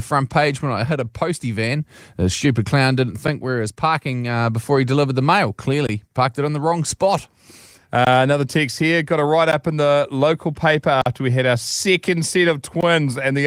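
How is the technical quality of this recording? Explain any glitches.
The recording has one kind of glitch: blocks of digital silence at 3.27, 5.87–5.89, 8.05–8.07, 9.52, 11.02–11.06 and 12.81–12.83 s. The sound drops out and returns abruptly. Gaps run 8 to 46 ms, several exactly 20 ms. Light Opus voice compression is present too.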